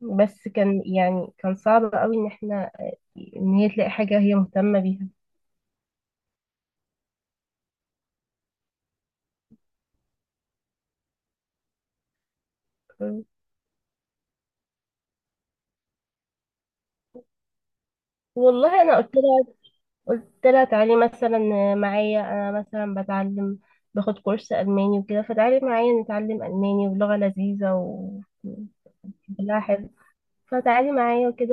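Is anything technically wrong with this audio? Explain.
Yes. Lost LE Audio frames cause two brief dropouts in this speech. At 7.05 s a gap of about 20 ms, consistent with two 10 ms frames, is bridged by the decoder repeating the last spectrum with randomised signs, giving a short noisy smear. From 29.84 to 29.88 s the same concealment covers about 30 ms, likely three frames, and sounds as a slightly longer grainy blur. The light coding texture elsewhere is likely from LC3 compression at around 64 kbps.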